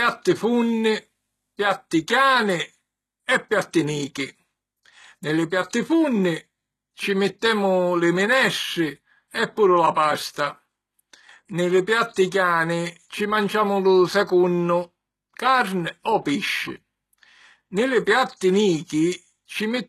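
A speech recording whose treble sounds gritty and synthetic throughout, with s sounds turning lispy and metallic and nothing at all above 12.3 kHz; this is most likely HE-AAC compression at a low rate, around 16 kbps, rebuilding the upper band from copied lower harmonics that no longer line up with the real ones. From 12.14 to 12.16 s a brief hiss of about 25 ms runs ahead of a sharp onset and softens it: pre-echo, where quantisation noise sized for the loud attack spreads back through the quiet start of the same transform block.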